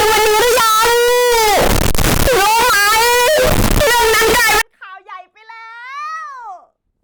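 From the start to 4.61 s the speech is blaring, harsh and squared-off, noise as loud as voice; likely float read as integer, 32-bit float samples decoded as 32-bit integers.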